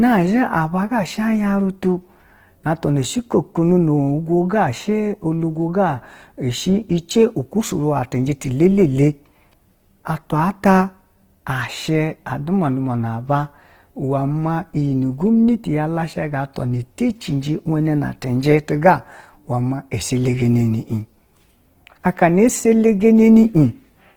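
A speech recording passed through a lossy encoder at a very low bit budget, which most likely points to Opus compression in its music mode near 16 kbps. With too few bits per band, the codec fills the spectrum with folded or noise-like content, so the voice comes across as grainy, rough and hissy throughout while still reaching up to about 20.2 kHz. At 4.49 s the transform block spreads its quantisation noise ahead of a sharp onset, producing pre-echo: a short hiss about 11 ms long arrives just before the attack and softens its edge.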